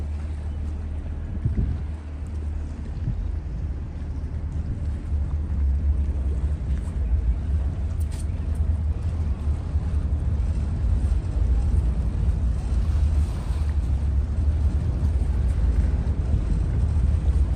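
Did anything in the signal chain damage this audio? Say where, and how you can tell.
Yes. The damage is at the network stage, on the Bluetooth link: lost LE Audio frames at 4.71 s and 14.72 s. Each is a brief smear rather than a hole. The first lasts about 10 ms, which fits one lost LC3 frame; the second lasts about 20 ms, consistent with two. The decoder filled each gap by replaying the last spectrum with randomised signs, so tonal content turns briefly noisy instead of cutting to silence or clicking. That noisy fill is what separates it from a plain dropout, and it is distinct from the light codec coding, which is also present.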